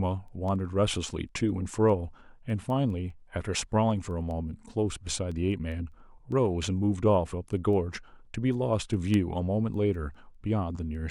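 From 0.28 s to 10.95 s the speech carries word clock ticks, a steady train of sharp clicks about every 0.2 s, some fifty in all. The receiving device is running on its own clock rather than locking to the sender's, and the two appear to differ by roughly 100 ppm. Each time they drift a full sample apart, a single sample is dropped or repeated, leaving a brief discontinuity in the waveform that is heard as a tick.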